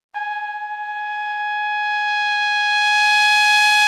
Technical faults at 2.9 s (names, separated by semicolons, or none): none